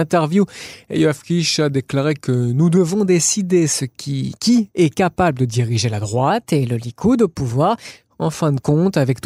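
From 0.74 to 2.77 s the speech drags, running about 6.4% slow and dropping roughly 114 cents, so it sits a semitone flat before snapping back. Then from 6.30 to 7.91 s it flips the other way, 6.4% fast and about 107 cents sharp. That's likely a drift correction step, where clock-matching software jumps the playback rate to refill and then drain its buffer, dragging speed and pitch together.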